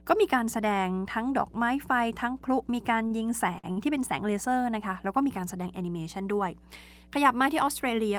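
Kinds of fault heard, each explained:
Mains hum: power-line leakage adds a steady 60 Hz tone about 20 dB below the speech, a flat unbroken line at the spectrogram's bottom.
Short stall from a late packet: the receiver held the last sound awaiting delayed data, stretching speech 31 to 51 ms at 3.07, 3.59 and 3.72 s, visible as repeated waveform cycles.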